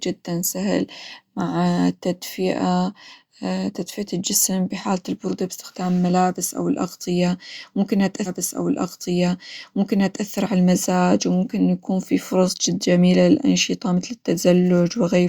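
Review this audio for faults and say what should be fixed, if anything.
At 8.25 s the speech jumps back and replays a stretch of the programme. The repeat runs to 10.25 s, adding 2 s to the clip. This is a stream segment repeated. The player fetched or queued the same two-second segment twice. A small blip marks the jump back, where the end of one segment meets the replayed start. To prevent it, track segment sequence numbers in the player and discard any segment already queued.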